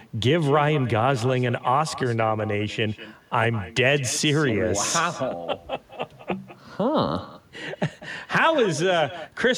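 From start to finish, the speech carries echo with no canceller. The far end is playing the call through a loudspeaker, its microphone picks that sound up, and nothing subtracts it before it is sent back. Each phrase therefore returns about a fifth of a second later, about 16 dB quieter and thinner. On a spectrogram every syllable has a faint duplicate trailing just behind it. The waveform shows low ghost bursts filling what should be gaps.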